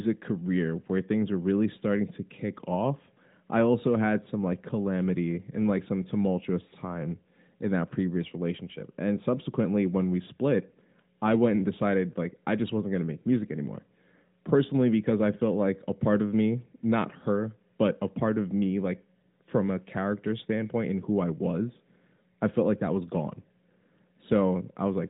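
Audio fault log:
No faults found; the speech sits on a narrowband mobile path with nothing above 3.8 kHz and only light coding texture, which fits AMR-NB in its 12.2 kbps mode.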